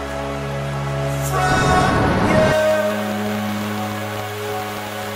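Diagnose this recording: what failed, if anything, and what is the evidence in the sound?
Train of clicks, 2.39–5.10 s: some 30 irregular spikes, 10.7 per second, about 10 dB above the sound, showing as vertical broadband spectrogram lines; likely analogue-wiring interference.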